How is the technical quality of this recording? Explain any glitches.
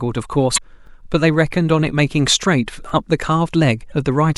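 Technical quality takes a hit from two kinds of glitch in this speech.

Damaged data in a compressed stream at 0.54–0.58 s and 3.88–3.92 s: corrupted frames throw the decoder off sync, so you get a brief glitch.

Overlapping chunks at 0.87–0.89 s and 2.89–2.92 s, 2 s apart: each new chunk starts early, replaying about 23 ms, which you hear as a quick glitch at each join.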